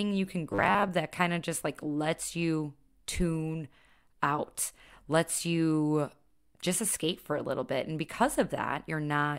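From 0.51 to 0.89 s, after "you can", a rigid 100 Hz buzz: robotic sound from repeated short buffers, likely 10 ms chunks replacing about half.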